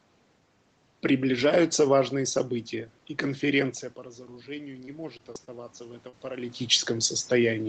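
From 4.26 s to 6.72 s the automatic gain is rising. After the input level fell by about 15 dB, the gain control slowly added about 6 dB, so the voice and the room noise swell together. On a waveform the envelope and the noise floor climb as a gradual ramp.

Between 4.85 s and 5.49 s there is repeated packet loss with a robotic sound. Four gaps, none longer than 20 ms and about 80 ms missing in total, were each patched by extending the previous sound. The result is choppy. A spectrogram shows smeared, repeated harmonic slices where fresh detail should be.

At 6.09 to 6.15 s, a short concealed packet loss leaves about 40 ms missing. The decoder continued the last sound and then blended back into the real audio, so the moment is heard as a brief smear or wobble. On a spectrogram it appears as a short, blurred band of frozen spectrum.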